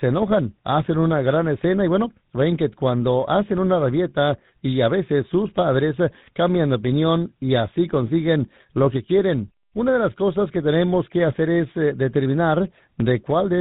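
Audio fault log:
Throughout, tandem speech coding: the call passed through three coding stages in sequence, G.726 at 40 kbit/s, G.711 mu-law at 64 kbit/s and then GSM full rate at 13 kbit/s, with two of them being lossy speech coders that each re-encoded the previous stage's already degraded output. The errors compound, so the speech sounds rougher, duller and more warbly than any single link would make it, with nothing above 3.9 kHz.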